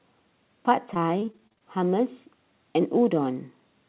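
From 0.94 to 1.62 s the speech turns choppy and robotic, with repeated packet loss leaving holes up to 41 ms long, each patched by stretching the preceding sound.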